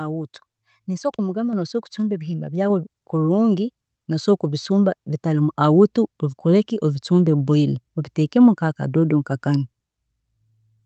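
At 1.53 s the speech and the room behind it jump up together by about 4 dB in a single step. This is a microphone volume stepped up: the call software judged the input too quiet and raised the device gain at once. The audio's top end stops near 8 kHz, which fits an Opus call link around 32 kbps.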